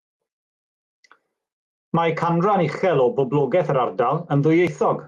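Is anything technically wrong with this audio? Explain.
Yes. Gain pumping runs through the whole speech clip. The input gain is likely set far too high, so a fast limiter or compressor clamps down on each loud syllable and releases in the pauses, swinging the level by around 15 dB. Loud and soft parts end up closer in level, squashing the dynamics. The call codec's top end, stopping near 12 kHz, suggests Opus at roughly 32 kbps.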